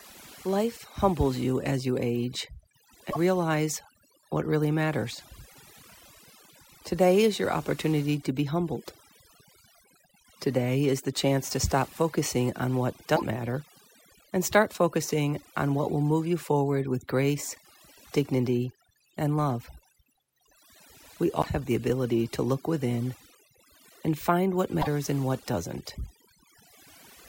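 A speech recording runs under heavy, overdone noise removal from start to finish. The noise reducer was pushed too hard. Individual frequency bands near its noise estimate get pulled far down or shut off, and quiet parts of the voice go with them. The background drops and breaks up into twinkling specks. Four short glitches also break the audio, each roughly 70 ms long. They fall at 3.10 s, at 13.15 s after "stop focusing on what", at 21.41 s just before "the ability to look", and at 24.81 s between "and find what" and "and what". Each is a sudden jump forward with a brief chirp, noise burst or gap. The likely cause is a broken MP3 bit reservoir. A few frames were lost, and the next frames reached back for borrowed data that was no longer there. The length fits two or three MP3 frames of about 26 ms.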